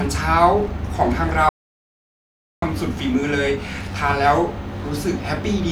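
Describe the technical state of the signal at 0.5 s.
At 0.5 s the speech signal is intact, with no audible fault at that point.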